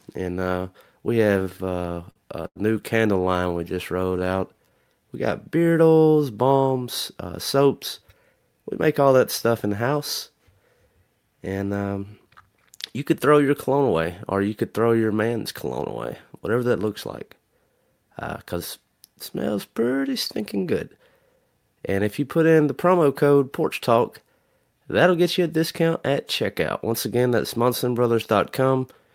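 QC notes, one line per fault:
1.39–2.58 s, repeated stalls (stutter), after "and uh we" and before "new candle": the buffer ran dry twelve times. The receiver stretched the last sound across each gap, the longest 89 ms, together about a fifth of the span, so the audio drags and stutters but nothing is lost.
3.25–4.94 s, jitter buffer slow-down, after "new candle": single pitch periods were repeated to rebuild the reserve. This adds 205 ms and plays at 88% speed, so the sound is drawn out at unchanged pitch.
6.83–9.67 s, 13.69–14.06 s, 20.40–21.46 s and 26.08–27.85 s (the last after "get you a discount"), jitter buffer speed-up: the buffer held excess audio, so short pitch-period pieces were cut out. Roughly 200, 50, 70 and 100 ms were removed, at 106%, 112%, 107% and 104% speed, which runs faster at the same pitch and sounds hurried in the first three.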